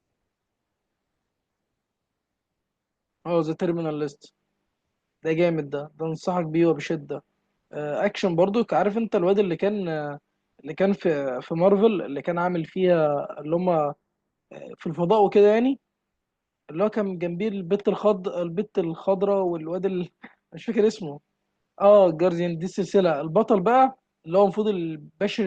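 No technical faults can be heard anywhere in the recording.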